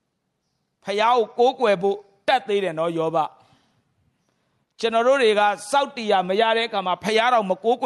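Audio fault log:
Throughout, gain pumping: the gain swings by around 5 dB, pulled down under each louder stretch of speech, squeezing loud and soft parts together, likely from input gain set too high with a fast limiter clamping it.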